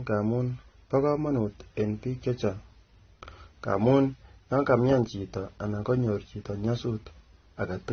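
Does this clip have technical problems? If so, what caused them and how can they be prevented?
Yes. The speech sounds dull throughout, with nothing above 6.3 kHz, and it carries several kinds of smearing and swirly artefacts at once. This is likely transcoding between lossy codecs. The sound fits a chain of low-bitrate AAC, then MP3, then AAC again. Each later encoder spends bits on the earlier damage and adds its own. The lowest bandwidth limit stays in the final file. To prevent it, keep a lossless master and encode to a lossy format only once, at an adequate bitrate.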